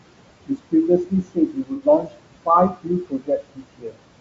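Noise suppressor artifacts run through the whole clip. The suppressor pulls the room noise down by about 21 dB in the gaps and lets it rise again under the speech. The room noise itself sits about 13 dB below the speech.

Also throughout, the speech has a rough, grainy texture with noise filling in between harmonics and a thin, artificial-sounding top end. The likely cause is low-delay AAC compression: AAC-ELD at 32 kbps, where short frames resolve pitch poorly and the damage is plainly audible.

From 0.47 to 0.74 s, speech is cut by the noise suppressor. The suppressor mistakes parts of the speech for noise and drops them by as much as about 22 dB, roughly a tenth of a second in total, leaving consonants and endings faint and swallowed.

From 1.05 to 2.23 s, the same speech cutting returns over a longer stretch. The suppressor again attenuates speech it has classed as noise, by up to about 22 dB, affecting roughly a second in total. 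Quiet portions sound faint and swallowed.

Inside that stretch, from 1.74 to 1.82 s, there is AAC frame loss with concealment. About 60 ms of coded audio is missing, which fits two lost frames. The decoder fills the gap from the last good spectrum, producing a brief smeared, noisy or phasey patch.

From 2.69 to 4.04 s, speech is cut by the noise suppressor once more. Parts of the speech are gated down by up to about 22 dB, totalling roughly a second. Soft syllables sink into the suppressed background, so they sound faint and swallowed.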